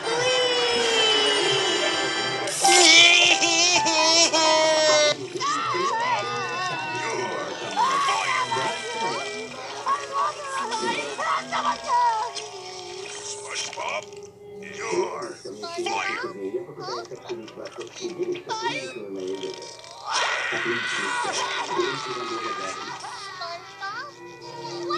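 No technical faults can be heard anywhere in the recording. Nothing in it points to a problem with how the audio was captured, processed or delivered.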